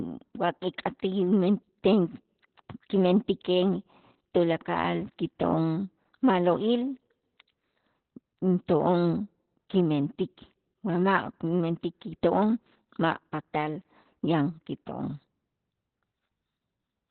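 Throughout, the speech has been squeezed through Opus voice compression, with the SILK coder working narrowband at heavy loss, which fits roughly 8 kbps. Nothing remains above 4.3 kHz, so the speech sounds muffled, hoarse and faintly robotic from start to finish.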